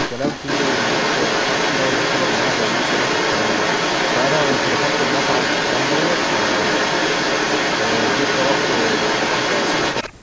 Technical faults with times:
0.00-10.13 echo leak
10.03-10.23 speech suppressed in double talk

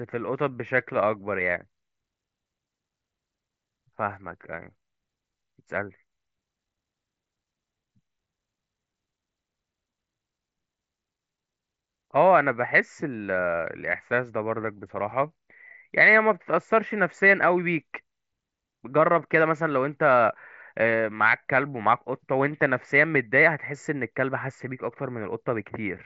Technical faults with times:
14.62 concealed Bluetooth headset packet loss

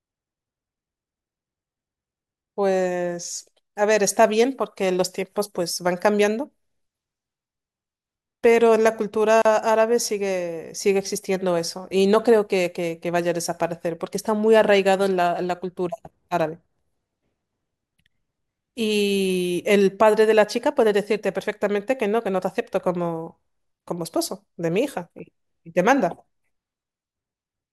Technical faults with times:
9.42-9.45 gap at a join of encoded pieces

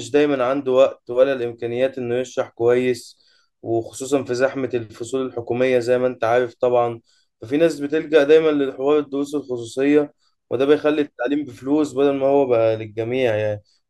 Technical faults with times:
none

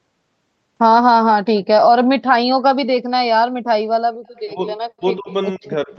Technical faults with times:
4.36-4.40 echo leak
4.47-4.67 speech suppressed in double talk
4.93-5.30 speech suppressed in double talk
5.58-5.91 speech suppressed in double talk
5.65-5.70 echo leak

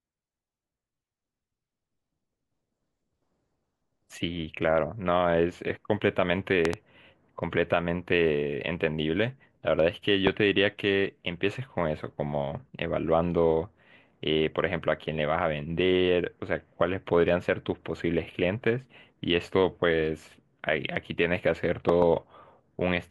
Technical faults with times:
6.65-6.75 loud pop
10.27-10.29 loud pop
21.89-22.04 loud pop

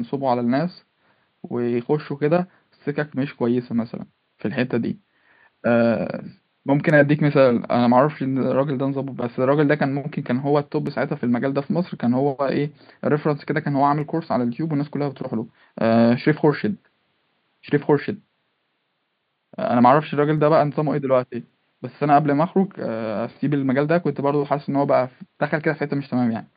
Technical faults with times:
6.90 dropped samples
10.87 dropped samples
14.01 dropped samples
21.49 dropped samples

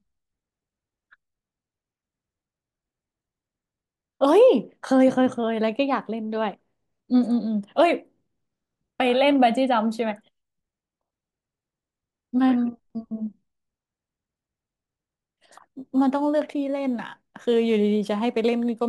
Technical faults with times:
15.74-18.88 crude rate conversion

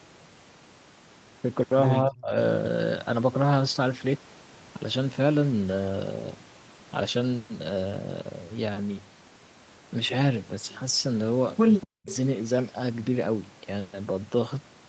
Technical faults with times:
2.07-2.35 speech suppressed in double talk
11.81-12.16 echo leak
11.84-12.07 speech suppressed in double talk

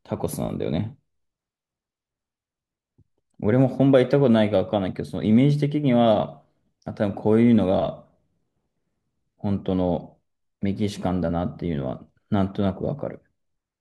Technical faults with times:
none

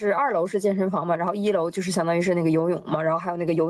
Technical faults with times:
0.00-3.70 gain pumping

